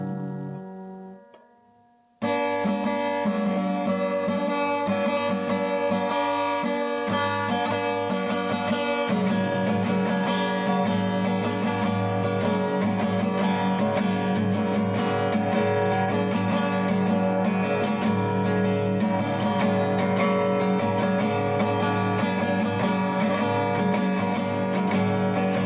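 No faults are audible; the band stops at about 4 kHz with the mild coding noise of a narrowband call path, which fits G.711 mu-law at 64 kbps.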